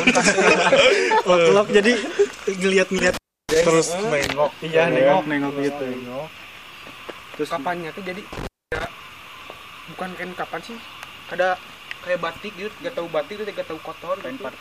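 The sound suffers from intermittent contact twice, at 2.99 to 3.66 s and 8.33 to 8.86 s. A loose cable or plug briefly opens. The signal drops out for about 0.32 s and 0.25 s, with crackle at each edge and faint hiss in the gap.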